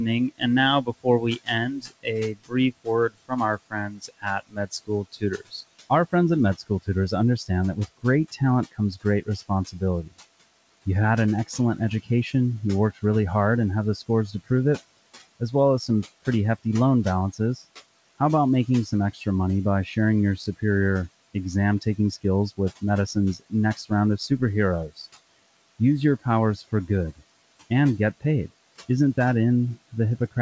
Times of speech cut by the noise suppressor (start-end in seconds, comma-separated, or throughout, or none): 0.31-10.13, 11.47-13.03, 13.96-14.48, 15.40-27.21